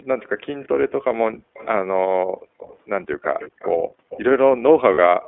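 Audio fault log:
throughout, iLBC codec: Everything sits between about 250 Hz and 3.5 kHz, with a rough, slightly synthetic grain that fits the 15.2 kbps mode and its 20 ms frames coded independently. A spectrogram shows an empty band above 3.5 kHz and smeared, blocky harmonics.
0.46–0.68, 1.54–1.68, 2.58–2.77, 3.22–3.72, 4.09–4.22 s, echo leak: A faint, delayed copy of the talker trails the original, likely from a loudspeaker path the far-end echo canceller did not fully remove. The first copy lags by 227 ms and the rest by 277 ms. They rise from about 30 dB to about 15 dB below the speech. A spectrogram shows a weaker, time-shifted duplicate of the harmonic pattern.
1.33–1.47 s, background gated by the echo canceller: The room sound drops abruptly by up to about 40 dB for roughly 150 ms, because the canceller clamped the microphone, and then returns. The waveform shows a near-flat notch in the noise floor, and the spectrogram shows a vertical dark strip.
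3.44–3.48 and 4.94–4.99 s, lost iLBC frames: Gaps of 20 ms and 40 ms, which fits one and two lost frames, are filled with a held, buzzy repeat of the last pitch cycle. Normal sound returns almost at once. The spectrogram shows flat, frozen harmonics across each gap.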